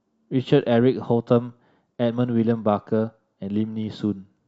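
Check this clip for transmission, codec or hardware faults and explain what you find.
Two short bursts of DAB burbling mark the speech, at 0.82 s and from 3.82 to 3.89 s. Weak reception lets bit errors slip past error correction into the MP2 data. Corrupted samples then put short blips of noise in individual sub-bands, and corrupted scale factors make sub-bands leap in level for up to a frame, which points to an error rate of a small fraction of a percent. Each burst sounds like brief blips of noise over the speech, unlike the clean silent gap of a dropout.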